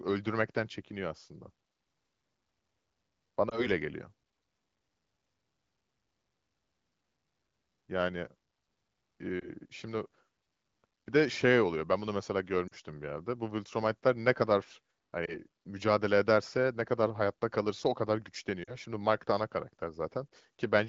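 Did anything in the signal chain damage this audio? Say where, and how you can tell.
Yes, lost AMR speech frames on the radio link caused brief dips or warbles at 3.49, 9.40, 12.68, 15.26 and 18.63 s. The wideband AMR-WB coding itself holds up, with speech extending to about 7 kHz. At each dropout the decoder repeats the last good pitch and vocal tract settings at falling gain. On a spectrogram the harmonics briefly freeze and fade, and the waveform envelope dips. The gaps at 12.68 and 18.63 s each cover two lost 20 ms frames rather than one.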